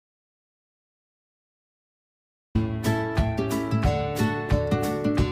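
The audio opens in an audio dropout to silence that is already under way at 0.0 s and lasts until 2.55 s, when sound resumes abruptly. The gap is silent with no room tone, most likely from lost input while the recorder kept writing, so that material is gone.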